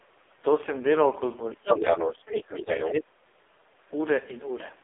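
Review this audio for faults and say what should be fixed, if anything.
The AMR narrowband mobile codec is audible throughout: nothing reaches above 3.7 kHz, and the speech sounds heavily buzzy and synthetic, which fits AMR-NB at its low 5.15 kbps mode. Prevent it by carrying the call over a wideband codec or at a higher bitrate.

The other side's voice leaking through runs from 1.52 to 2.92 s at roughly the same level as the main speech. This is likely an echo canceller failing to remove the loudspeaker signal from the microphone. Prevent it by improving echo canceller convergence and adding residual echo suppression.

Speech suppressed in double talk appears twice. There is a brief dip of a few dB at 2.57 to 2.65 s, then a deep cut of around 35 dB from 2.89 to 3.53 s. The echo canceller likely attenuated the near-end talker while the far end was active. Prevent it with better double-talk detection so near-end speech is not gated during overlap.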